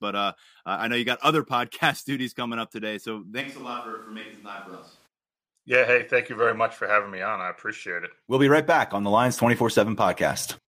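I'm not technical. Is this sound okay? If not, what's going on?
No, not quite. From about 3.43 to 5.05 seconds the speech suddenly goes roomy and hollow, a bit quieter and thinner in the low end, with more background hiss and room sound around it. Then it snaps back just as abruptly. That's what a switch to a distant microphone sounds like. Most likely the close mic dropped out for that stretch and the recording fell back on one further away, like a camera mic.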